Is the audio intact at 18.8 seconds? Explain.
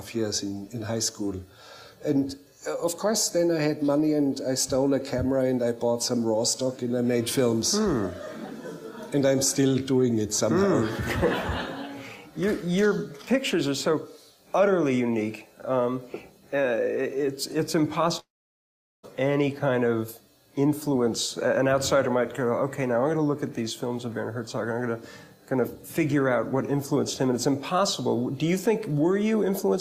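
No. A long network dropout, likely, spans 18.19 to 19.06 s. About 0.84 s is lost, and a brief fading fill drops into silence, showing as a blank spectrogram gap.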